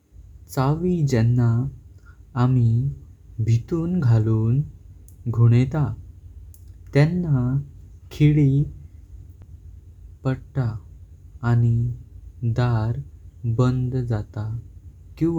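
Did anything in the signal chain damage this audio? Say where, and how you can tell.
Yes. At 9.42 s the speech ticks and mutes for a few milliseconds, then resumes from a different point, a CD skip at the playback stage. A knock or disc flaw sent the laser to another turn of the spiral, so the audio jumps by whole disc revolutions.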